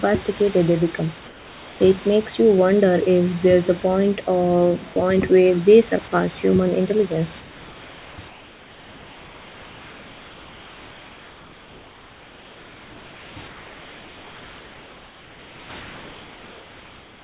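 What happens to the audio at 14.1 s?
At 14.1 s the real room background has given way to a flat, featureless hiss, about 2 dB quieter, with none of the small fluctuations heard before. This comfort noise in place of the background runs from 13.48 to 15.7 s, about 2.2 s. The likely cause is discontinuous transmission: the sender's voice detector judged the gap silent and stopped sending audio, so the receiver filled it with synthetic noise matched roughly to the background's level and shape.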